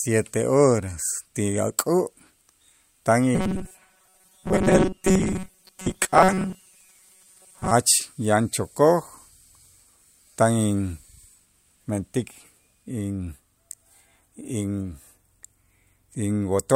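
A speech recording in which, from 3.35 to 7.71 s, the voice turns into a rigid, metallic buzz at 188 Hz that only loosely tracks the words. This is robotic sound from repeated short buffers, likely caused by audio arriving too seldom, so a 5.3 ms slice kept being replayed for most of that stretch while the real audio was skipped.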